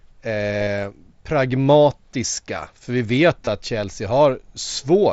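Concealed Bluetooth headset packet loss at 0.63 to 0.67 s and 3.45 s, after "vi vet": lost headset packets were patched by repeating recent waveform, leaving a brief buzzy hold.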